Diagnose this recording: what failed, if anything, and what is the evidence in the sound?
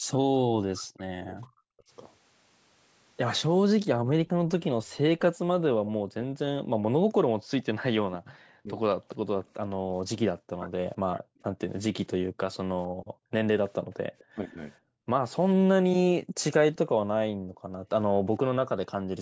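Speech suppressed in double talk, at the call-processing stage: from 0.07 to 1.9 s and again from 8.61 to 19.07 s, the talker's level drops in pieces, by around 40 dB at worst and for about a second and a half in each span. Likely cause: the echo canceller mistook overlapping far-end speech for echo. The waveform shows bites out of the envelope.

Background gated by the echo canceller, also in call processing: between 3.97 and 17.89 s, the room tone drops by about 40 dB for around four seconds in total and then returns. The canceller clamps the microphone while the loudspeaker plays. On a spectrogram, the noise floor shows dark rectangular holes.

Echo leak, at the far end's loudspeaker-to-microphone path: from 12.53 to 16.78 s, a faint copy of the speech trails it by 455 ms, around 30 dB down. Likely cause: residual echo the canceller failed to remove. A spectrogram shows ghost harmonics shifted in time, below the 8 kHz band edge.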